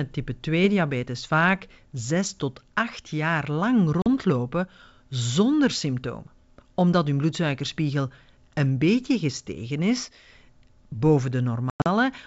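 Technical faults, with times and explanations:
4.02–4.07 s and 11.70–11.89 s, packet loss on an ADPCM call: 40 ms of sound goes silent at the first point, about two packets. At the second, 140 ms goes missing in gaps spread over 160 ms, the longest lasting 100 ms, which fits roughly seven lost packets. Each gap has hard edges. When the sound comes back it is slightly distorted and settles within tens of milliseconds, because the receiving decoder's predictor and step size no longer match the sender's. A plain dropout resumes cleanly, so this distortion points to ADPCM. The G.722 coding itself leaves only faint wideband hiss.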